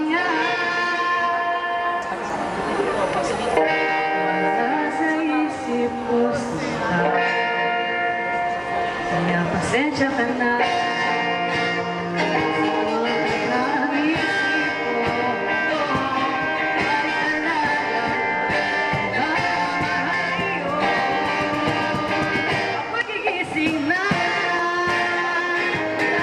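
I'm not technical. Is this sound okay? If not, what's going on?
No. Compressed frames skipped: small chunks of the stored audio were missing or damaged, so playback jumps ahead at 1.93–2.39, 20.04–20.13, 23.01 and 24.59–24.69 s.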